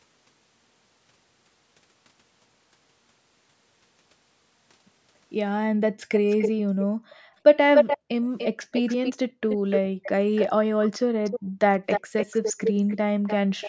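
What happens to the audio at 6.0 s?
From 5.96 to 6.01 s the echo canceller gates the background, ducking the microphone about 40 dB during loudspeaker playback: a room-sound dip or dropout.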